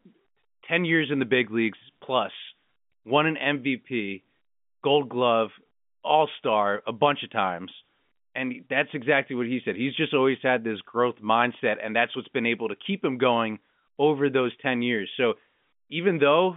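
No technical faults can be heard in the speech. It carries the narrow band of G.711 telephone coding, running from about 150 Hz up to 3.5 kHz, with at most a faint trace of the coding.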